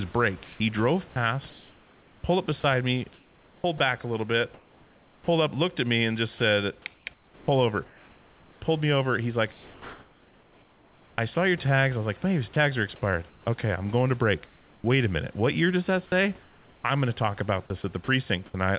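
Sound chopped by the voice detector, likely from the sender's gating switching repeatedly, at 0.12 to 14.84 s and 16.42 to 18.54 s: comfort noise replaces speech edges, so speech sounds choppy.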